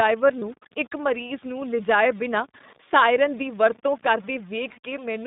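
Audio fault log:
throughout: low bit depth without dither. A gritty, grainy distortion rides on the speech and shifts with it, sitting roughly 30 dB below the signal. Quiet tails crackle. The likely cause is truncation to very few bits, about seven, with no dither.
throughout: iLBC codec. The speech is confined to about 150 Hz to 3.7 kHz and sounds slightly rough and synthetic. The damage is plainly audible. This fits iLBC's 15.2 kbps mode, coding each 20 ms frame on its own.
0.40–0.44 s, 4.72–4.78 s: lost iLBC frames. Two short gaps, of 20 ms and then 40 ms, are filled with a held, faintly buzzy vowel-like sound. The decoder repeats the last pitch cycle mixed with noise. Because each frame stands alone, the speech recovers at once.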